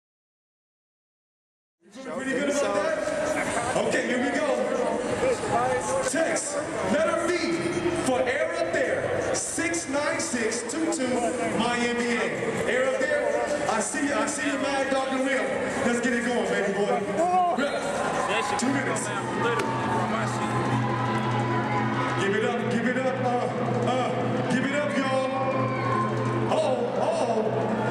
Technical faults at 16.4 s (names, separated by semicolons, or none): none